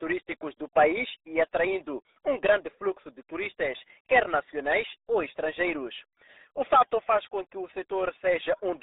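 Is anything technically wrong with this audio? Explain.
Yes. Throughout the clip, the speech carries the sound of the RealAudio 14.4 codec, a dial-up-era speech coder whose heavy data reduction fits a bitrate of roughly 8 kbit/s. It keeps only a telephone-like band of about 300 Hz to 3.7 kHz and rebuilds the rest coarsely, so the voice comes out muffled and gargly. On a spectrogram, energy stops at a flat ceiling near 3.8 kHz, leaving nothing above, with a thinned floor below 300 Hz.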